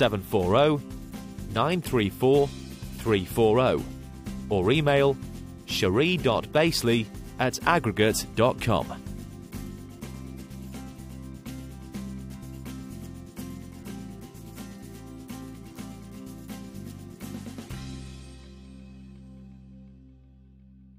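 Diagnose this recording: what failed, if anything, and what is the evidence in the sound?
Nothing failed; no stage shows any audible fault.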